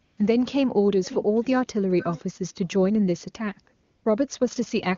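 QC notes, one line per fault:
0.05–0.17 s and 3.83–4.05 s: AMR comfort noise. Speech frames stop for 120 ms, then 220 ms. The receiver fills each gap with generated noise built from a rough level and spectrum estimate. The real background is swapped for a smooth, steady hiss that switches in and out.
1.04–1.24 s, 1.42–1.62 s, 1.99–2.21 s: echo leak. A quiet copy of the speech returns 440 ms late, well below the main signal and faintest in the middle burst. It is likely a loudspeaker at the far end whose echo canceller let part of the pickup through.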